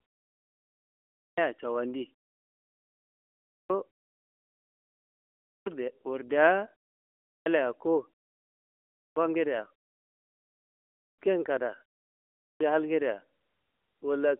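Clipped start after a pause occurs at 1.16, 3.48, 5.45, 7.26, 8.94, 10.98 and 12.41 s. The output device drops into sleep during each silent gap of roughly 0.6 to 1.6 s and needs time to wake before it passes sound again. About 0.2 to 0.22 s of speech is swallowed each time, so every phrase bursts in abruptly out of silence with its opening sounds missing, heard through a narrowband mobile line topping out near 3.5 kHz.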